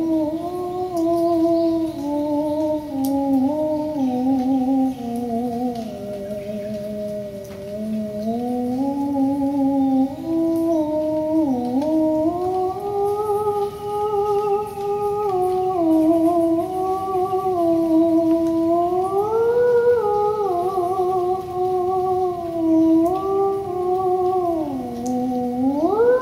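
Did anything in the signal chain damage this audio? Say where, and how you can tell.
No, nothing along the way seems to have harmed this one; I can't hear any stage in the chain leaving a mark on the sound.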